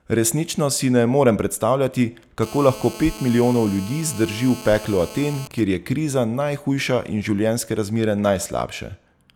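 From 2.43 s to 5.48 s a GSM phone buzz sits under the speech at about 17 dB below it. A 2G handset in a call nearby is pulsing its transmitter about 217 times a second, and the audio electronics rectify those radio pulses into a harsh, rasping 217 Hz tone thick with harmonics. It holds steady and ignores the speech. Mains hum is smoother and sits at 50 or 60 Hz.

At 5.51 s the buzz changes to GSM signalling bursts, which run until 6.72 s at a lower level, roughly 25 dB under the speech. The phone's user has stopped talking, so the handset sends only short clusters of bursts, and these come through as even ticks with a longer 217 Hz buzz twice a second. That broken, rhythmic grouping is what separates it from the continuous rasp just before.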